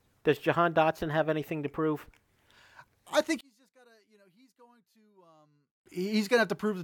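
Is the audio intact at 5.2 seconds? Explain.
No. From 3.41 to 5.86 s, just after "I think", the centred speech drops by about 35 dB, leaving a faint residue. The likely cause is one channel inverted: reversed polarity on one side cancels the shared content when the channels sum to mono.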